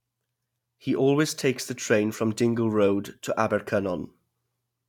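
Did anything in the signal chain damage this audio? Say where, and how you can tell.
No, nothing in this recording points to chain damage.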